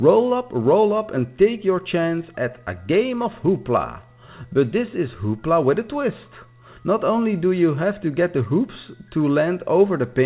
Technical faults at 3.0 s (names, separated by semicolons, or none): none